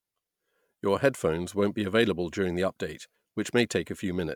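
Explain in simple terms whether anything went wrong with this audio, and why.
Nothing stood out on listening to this speech recording; no glitches, dropouts or other problems could be heard at any point.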